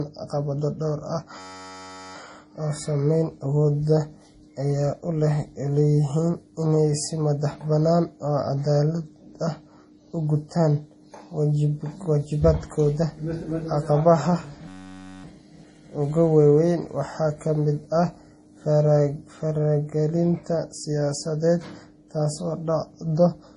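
Throughout, the speech sounds watery and swirly, with a hard spectrogram ceiling at 10.5 kHz. This is likely heavy MP3 compression, fitting a bitrate near 32 kbps.

From 1.39 to 2.16 s and again from 14.68 to 15.24 s, a system hang loop repeats one 10.67 ms slice. It sounds like a steady 93.8 Hz buzz, which fits a 512-sample buffer. On the waveform it appears as identical repeating cycles, and on the spectrogram as evenly spaced horizontal harmonic lines.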